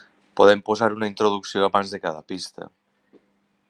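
Listening through the recording, nothing stood out as a technical problem at any point.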